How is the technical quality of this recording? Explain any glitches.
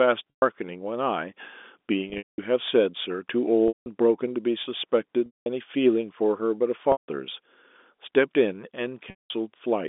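The recording has six audible dropouts, heard as a brief buzzy hold on the sound that fades into silence before the speech cuts back in. The audio sits in a narrow telephone band, roughly 250 Hz to 3.6 kHz, consistent with G.711 telephone coding.

The packet loss with pitch repetition occurs at 0.3 s (120 ms), 2.1 s (240 ms lost, scattered over 280 ms, with the longest run 200 ms), 3.68 s (180 ms), 5.26 s (200 ms), 6.92 s (160 ms) and 9.1 s (200 ms). Each gap starts with the last pitch cycle looping for about 50 ms and then fades to silence, because these losses are much longer than that. Speech resumes with a short cross-fade. The lost stretches fit 20 ms packets, and the receiver's concealment repeats the last waveform period to cover them.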